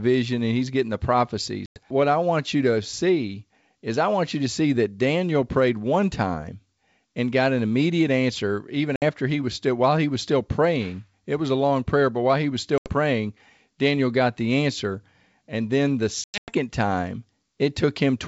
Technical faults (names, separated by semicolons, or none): packet loss on an ADPCM call